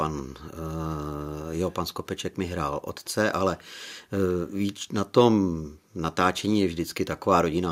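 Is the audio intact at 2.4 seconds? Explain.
Yes, at 2.4 seconds the speech plays through intact, with no dropout, click, distortion or other technical fault at that moment.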